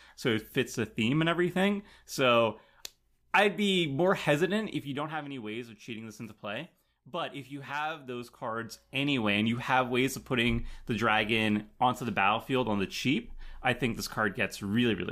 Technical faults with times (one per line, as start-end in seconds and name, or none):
8.32-9.28 zipper noise